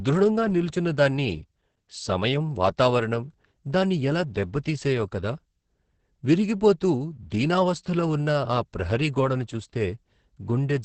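From start to finish the speech carries Opus voice compression at a low rate, which sounds like about 10 kbps through the SILK coder. Nothing gets through above roughly 8.5 kHz, so it's muffled and dull, and the excitation is coded so coarsely that voiced sounds turn hoarse and a bit robotic. It's heavy damage, coded in the usual 20 ms frames.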